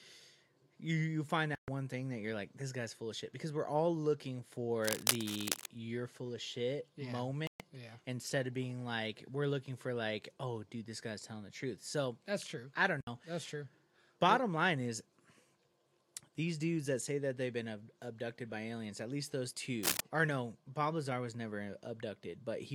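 A digital broadcast dropout cuts the sound at 1.55 s, leaving a silent hole of about 130 ms before it returns at 1.68 s. The receiver stopped getting decodable frames and muted until clean ones arrived again. The gap's length fits roughly four lost frames, and whatever was broadcast during it is simply gone.

Cable scratch noise follows from 4.82 to 5.66 s. A dense, irregular burst of scratching rides over the sound at about the same loudness as the programme, likely from a worn cable, connector or control being moved so its contact resistance jumped about rapidly.

A second digital broadcast dropout mutes the audio from 7.47 to 7.61 s. It is another hole of about 130 ms, consistent with four frames failing. At 13.01 s a shorter dropout opens a gap of about 64 ms, closing at 13.08 s, which fits two lost frames.

Cable scratch noise returns briefly from 19.83 to 20.00 s, a short rustling crackle this time somewhat louder than the sound beneath it.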